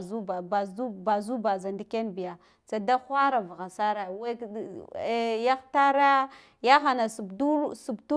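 No technical faults can be heard anywhere in the recording; the signal stays continuous and steady throughout.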